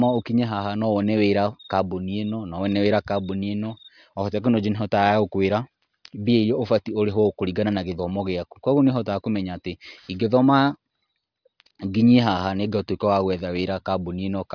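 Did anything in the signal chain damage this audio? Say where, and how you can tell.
Yes, there is aliasing from a sample-rate conversion, throughout the speech. Sibilants turn gritty and metallic, and energy runs hard up to a 5.5 kHz edge. That fits a drop to 11 kHz with no anti-alias filter, folding unrelated tones back about 30 dB down. Simple band-limiting would only sound dull.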